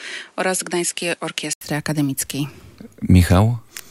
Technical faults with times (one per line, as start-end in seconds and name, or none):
0.00-1.61 input switched to a poorer device